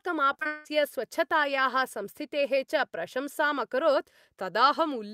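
From 0.33 to 0.67 s the speech breaks up with repeated packet loss, giving a robotic sound. Audio went missing several times in quick succession, apparently four separate holes, the longest about 180 ms. Each was covered by stretching the last sound forward, so roughly 70% of that third of a second is patched rather than real. On a waveform the span shows looped, near-identical cycles with abrupt joins; a spectrogram shows frozen horizontal harmonic bands broken by sharp vertical edges.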